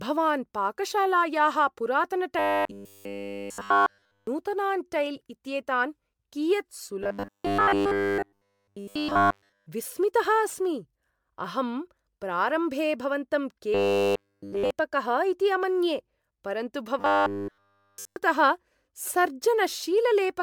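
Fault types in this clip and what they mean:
Generation loss: The speech has most likely been decoded and re-encoded as MP3 around ten times at about 135 kbit/s, each pass quantising again on a shifted frame grid so the errors pile up rather than cancel. Across the whole clip this leaves a swirling, hollow, smeared quality that a single encode at that rate would not produce, with blunted consonant attacks.
Robotic sound from repeated short buffers: New audio evidently stopped arriving in time, and the playback side kept looping the last short chunk instead, with essentially all of the real signal skipped during those stretches. The loop imposes a fixed 100 Hz buzz, which fits a buffer of about 10 ms, turning the voice into a rigid metallic drone that loosely tracks the syllables. It is heard from 2.39 to 4.27 s, 7.02 to 9.67 s, 13.75 to 14.71 s and 16.99 to 18.17 s, likely from an underrunning stream.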